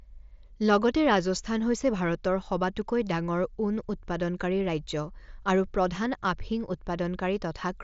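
No technical faults turn up anywhere in the speech, which comes through a Bluetooth mSBC headset link working as intended.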